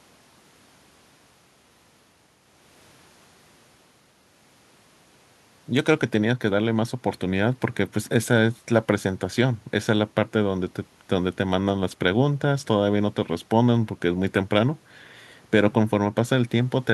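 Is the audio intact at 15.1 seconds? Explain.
Yes, the audio is intact at 15.1 s, with no audible fault at that moment.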